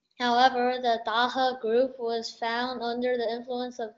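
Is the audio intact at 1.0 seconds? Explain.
Yes, the audio is intact at 1.0 seconds, with no fault at that moment.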